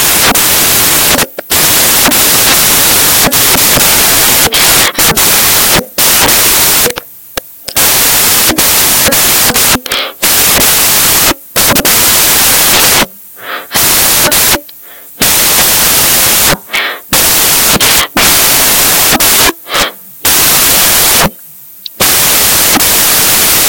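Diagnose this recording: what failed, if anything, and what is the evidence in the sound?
The failure is at sample-format conversion: samples built from the wrong bytes. Throughout the clip, the speech comes with loud white noise. Unlike steady hiss, the noise tracks the signal, because misassembled low-order bytes now dominate every value.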